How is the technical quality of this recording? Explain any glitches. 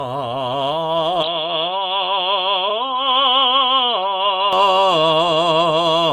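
The music has one clear fault. From 1.23 to 4.53 s, the input likely switched to a poorer device. Nothing passes above 4.2 kHz, so the music turns dull, slightly quieter, with faint added background noise.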